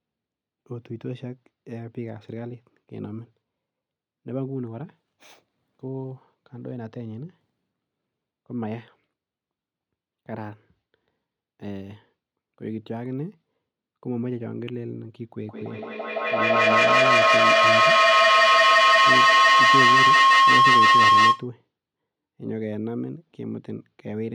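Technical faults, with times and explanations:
15.41 to 21.54 s, feedback howl: a piercing tone around 1 kHz climbs to about 14 dB above the speech, with the loop repeating roughly every 150 ms. Sound loops between two devices sharing a room, gaining level each trip and narrowing to the loop's favoured frequency.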